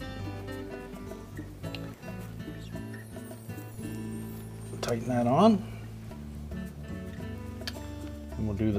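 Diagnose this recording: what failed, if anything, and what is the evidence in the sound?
DC step at the converter input. Low thumps at 3.74 s and 6.10 s. The zero line jumps about -40 dBFS, then decays via a 20 Hz high-pass.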